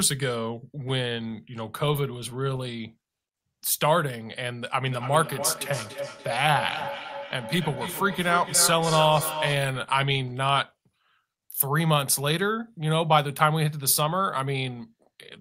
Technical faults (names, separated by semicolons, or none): feedback echo between two devices